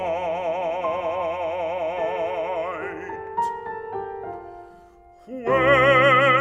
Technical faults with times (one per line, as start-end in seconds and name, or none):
none